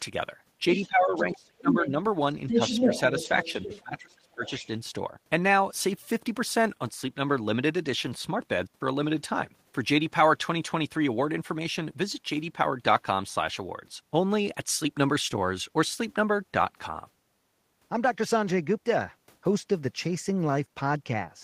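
A speech recording whose first five seconds carry two related faults. The other side's voice leaking through appears from 0.72 to 1.88 s and from 2.48 to 3.82 s, roughly as loud as the talker, then briefly from 4.44 to 4.67 s far fainter. The likely cause is a loudspeaker at the talker's end whose echo was not fully cancelled. What marks it is an added second voice layered on top of the talker. Speech suppressed in double talk runs from 0.87 to 1.99 s, 2.52 to 2.92 s and 3.28 to 4.43 s. Here the talker's own voice sinks or breaks up, by around 25 dB in the first and last stretches and only slightly in the middle one, for about a second in total at 0.87 s and under a second at 3.28 s. This likely comes from the echo canceller turning everything down while both sides spoke at once. It differs from the leak because the talker loses level rather than gaining a second voice.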